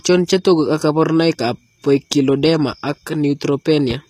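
The speech was likely squeezed through HE-AAC compression at a low bitrate around 24 kbps, so treble is rebuilt from copied lower bands, leaving sibilants gritty and metallic throughout.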